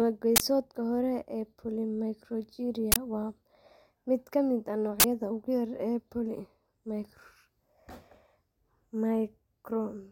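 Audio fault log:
0.36–0.40 s, 2.92–2.96 s and 5.00–5.04 s, uninitialised buffer: each time a 40 ms block was sent to playback before any audio was written into it, so stale memory contents were read as samples, breaking into the speech as an abrupt crack or burst of digital noise.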